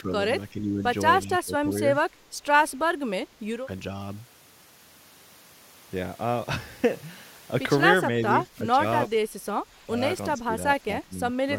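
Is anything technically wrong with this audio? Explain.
Yes. The speech dips in level in eight places: 0.01 to 0.12 s, 0.51 to 0.83 s, 1.24 to 1.75 s, 2.04 to 2.21 s, 8.1 to 8.83 s, 9.07 to 10.01 s, 10.38 to 10.56 s and 10.79 to 11.35 s. This is speech suppressed in double talk. The drops run from about 5 dB to about 15 dB, deepest near 10.4 s. The likely cause is an echo canceller that cannot tell the talker from the returning echo, so it turns the speech down.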